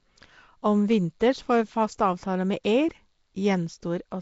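Nellymoser compression throughout: rough, hissy, smeared, underwater-sounding speech with nothing above 7.7 kHz, likely from coarse fixed-rate block coding that fills starved bands with noise.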